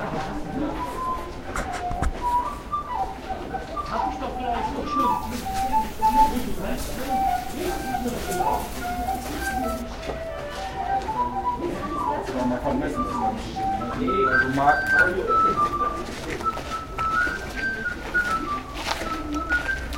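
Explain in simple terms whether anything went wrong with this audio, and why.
Something did go wrong, between about 5.0 and 9.8 seconds: pre-emphasis left on. Some recording and broadcast systems boost the treble on the way in and expect a matching cut on the way out. Here that cut never happened, so for those five seconds the sound turns thin, bright and hissy. The boost matches the curve used for FM radio. Unlike distortion, nothing crackles or breaks up; the balance simply tilts toward the top.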